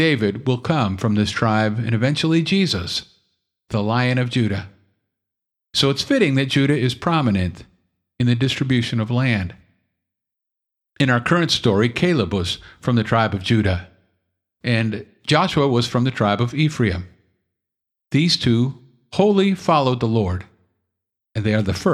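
No technical faults are audible.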